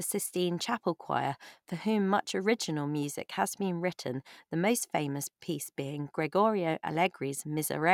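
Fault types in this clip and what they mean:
Nothing stood out on listening to this speech clip.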